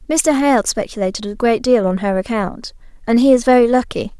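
No technical faults can be heard anywhere in the speech recording. There are no events to place on a timeline.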